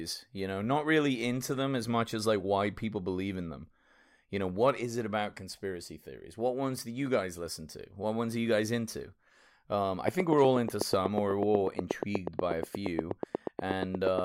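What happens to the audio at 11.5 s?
A train of clicks runs from 10.08 to 14.2 s. Regular ticks come 8.3 times a second, loud over the speech. Nearby interference is the likely cause.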